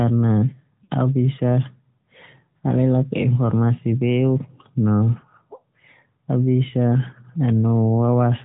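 The whole clip has passed through the AMR narrowband mobile codec. The audio was sampled at 8 kHz and rebuilt from a vocal tract model driven by sparse pulses, so nothing above 4 kHz survives. The codec damage is plainly audible: speech sounds boxed-in and somewhat buzzy and synthetic. That level of coarseness fits a mid-rate mode around 10.2 kbps.

At 0.84 s, lost AMR speech frames interrupt the signal for about 40 ms, which fits two lost 20 ms frames. The decoder stretched the last good pitch and vocal tract settings with falling gain, producing a brief smeared warble and dip before the sound recovers slightly rough. A shorter loss at 5.2 s, about 20 ms or one frame, leaves a quicker dip and flutter.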